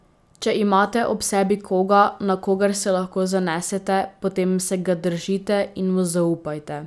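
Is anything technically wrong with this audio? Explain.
No, nothing technically wrong turns up anywhere in this speech recording, so there's nothing here to flag.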